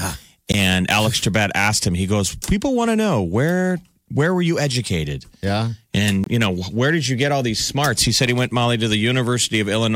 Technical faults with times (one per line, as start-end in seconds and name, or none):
0.52 block of digital silence
6.24-6.26 block of digital silence
8.27 block of digital silence